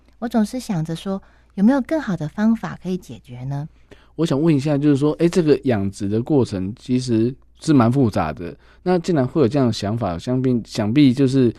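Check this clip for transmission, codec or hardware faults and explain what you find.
Nothing in this speech recording points to a fault of any kind. No moment in the audio calls for explaining a cause.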